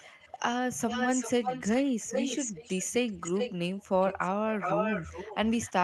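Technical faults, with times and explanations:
0.00–0.39 s, 0.75–2.85 s, 3.07–3.85 s, 4.01–4.29 s and 4.59–5.84 s, echo leak: a delayed copy of the speech trails it by roughly 0.37 to 0.39 s. It is faint at first, stronger at 4.01 s, and elsewhere nearly as loud as the speech. The likely cause is a loudspeaker's pickup that the far end's echo canceller missed.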